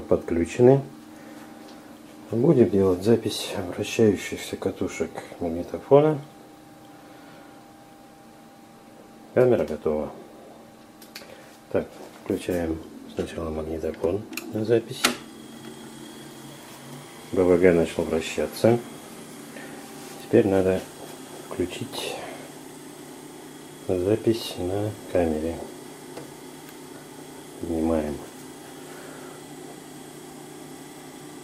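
No technical faults are audible.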